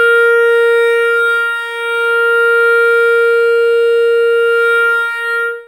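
Right from the start and all the way through this music, there's imaging from linear upsampling. The top end sounds dull, and a faint metallic shimmer rides on the bright, high parts. That fits audio raised from a 12 kHz rate to 48 kHz by drawing straight lines between samples, which filters poorly. A mirrored copy of the spectrum sits between 6 and 12 kHz, roughly 35 dB below the music.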